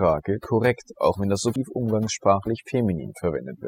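Overdone noise removal runs the whole way through: the reduction was pushed so hard that the background drops to twinkly near-silence. At 1.56 s, right after "korrekt auch wenn das", there's a quick blip from damaged data in the compressed stream, where the decoder lost sync.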